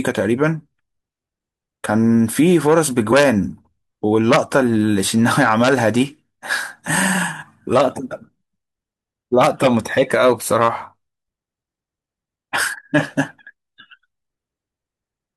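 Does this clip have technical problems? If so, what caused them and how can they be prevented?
Yes. At 3.11, 5.06 and 7.41 s the speech briefly jumps ahead. These are compressed frames skipped: whole frames, about 23.2 ms each, were lost or rejected, dropping roughly two to three frames (about 50 to 70 ms). Checksummed storage and reliable transfer would prevent this.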